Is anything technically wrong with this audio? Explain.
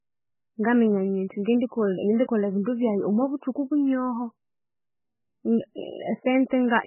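Yes, there are two faults.

Throughout the speech there is heavy damage that most likely comes from MP3 compression. Nothing sounds above 3 kHz, and weak frequency lines drop in and out, giving a watery, swirly sound. That points to a very low bitrate, near 8 kbps. On a spectrogram, everything stops at a hard ceiling with flickering holes below it.

From 1.44 to 1.46 s there is pre-echo. The codec spreads noise sized for a loud attack across the whole block, so about 25 ms of hiss comes before the onset and blurs it. On a waveform, low noise appears just before the attack.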